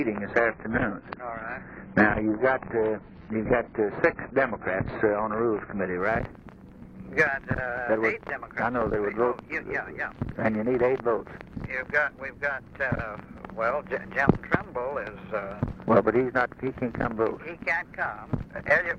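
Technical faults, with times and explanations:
0.0–6.0 s, adaptive stream starting at a low bitrate: the opening six seconds carry nothing above 6.8 kHz, so the top end is dull and the coding artefacts are stronger. The player began on a thin rendition to get playback going quickly, then switched to a richer one once it had gauged the connection. At 6.0 s the treble returns abruptly with no gap, a jump that points to a step from roughly 16 kbit/s AAC to about 96 kbit/s.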